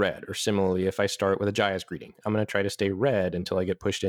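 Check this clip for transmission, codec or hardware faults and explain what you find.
One fault runs through the whole clip: periodic clock jitter. Interference is wobbling the converter's sampling clock at a single rate of around 1 kHz, so every component of the speech picks up sidebands spaced about 1 kHz above and below it, strongest on the higher frequencies. The result is a rough, metallic edge on the speech. Unlike hiss or a hum, it disappears completely in the pauses, because it exists only as a byproduct of the signal itself.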